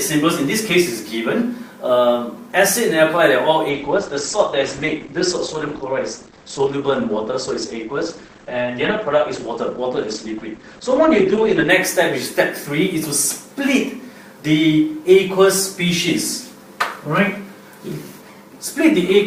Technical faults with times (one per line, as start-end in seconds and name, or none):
3.69-11.69 adaptive stream at a lower bitrate